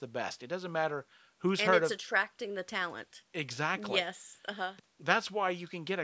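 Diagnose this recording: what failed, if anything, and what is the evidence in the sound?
Nothing failed: the speech shows only the expected signature of call microphone processing, with the lowest bass rolled off by its high-pass filter and no content above 8 kHz.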